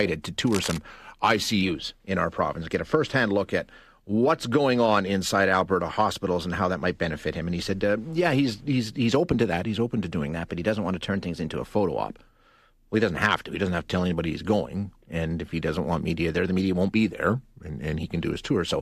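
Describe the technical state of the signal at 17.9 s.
At 17.9 s the signal is near the end of a drift correction step that runs from 17.13 s to 17.98 s, starting just after "the media won't be". Playback there is slowed by about 6.5%, and pitch drops with it by 116 cents, a little over a semitone. The speech sounds abruptly flat and drawn out, then snaps back to normal rate at 17.98 s. The likely cause is clock-matching software stepping the playback rate to rebalance its buffer.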